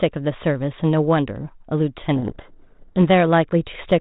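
From 2.16 to 2.99 s there is a codec payload misread. The G.726 code words are read in the wrong bit order. The decoder rebuilds false differences from them. The speech is buried in harsh distortion until the ordering matches again at 2.99 s.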